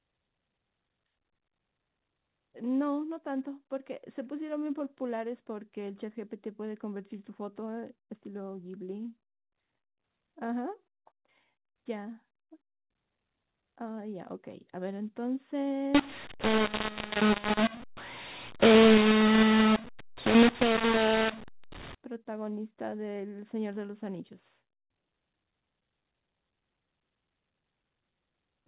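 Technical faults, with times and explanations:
15.95–21.95 s, mu-law and A-law mixed up: for these six seconds the telephone-band speech, A-law coded like the rest of the clip, is decoded as mu-law, so every 8-bit code maps to the wrong level. Loud and soft parts come out scrambled, giving a harsh, grainy distortion, and pauses fill with hiss because the quietest codes land well above silence. Unlike clipping, the damage reaches quiet passages too, and it stops abruptly at 21.95 s.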